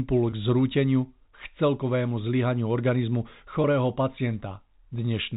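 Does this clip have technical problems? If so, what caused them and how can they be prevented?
Yes. The problem is packet loss with pitch repetition. Each gap points to a single dropped packet of about 20 ms, at 0.30 to 0.32 s and again at 3.62 to 3.64 s, just after "k celkovému zlyhaniu organizmu". The receiver filled each hole by repeating the last pitch period of the sound. Because the losses are so short, the repetition never fades to silence. Each one comes across as a brief, slightly held, buzzy note before normal speech resumes. The G.711 telephone coding carrying the call limits the sound to the telephone band and adds only faint quantisation noise. Prevention: carry the call on a less congested network path with prioritised voice traffic, or add forward error correction or redundant packets, so that single losses are recovered rather than concealed.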